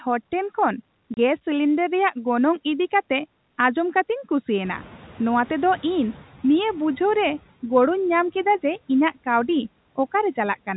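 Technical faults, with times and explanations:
1.14 to 1.17 s, packet loss filled with silence. The speech drops out for 30 ms. The gap is pure silence, not a smoothed repair. Its edges are abrupt. The sound jumps from signal to silence and back. The length fits a single lost 30 ms packet. The receiver had nothing to play for that stretch and inserted silence. The hard cut is what makes the hole stand out.
4.64 to 6.37 s, noise suppressor catching up. The room noise jumps up just before this, by about 16 dB around 4.5 s. The suppressor still holds its estimate of the old, quieter noise. So the louder noise comes through with little reduction at first. Over 1.73 s the estimate adapts. The noise then sinks by about 8 dB. The result is an audible swell of background noise that gradually sinks partway.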